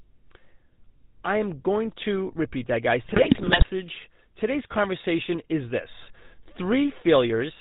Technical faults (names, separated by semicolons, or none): GSM full-rate codec; GSM bit errors